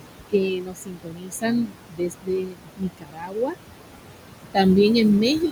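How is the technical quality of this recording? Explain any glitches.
Noise suppression has left audible damage across this speech clip, with room noise sitting only about 8 dB below the voice.

Noise suppressor artifacts run throughout. Bands judged as steady noise are pulled down by about 21 dB, so the background pumps, sinking between words and rising under them, unlike the constant hiss of untreated room noise.

Speech cut by the noise suppressor affects roughly three seconds between 0.29 and 3.6 s. Quiet speech was mistaken for noise and lowered by up to about 22 dB, so the affected speech sounds swallowed rather than clipped or dropped out.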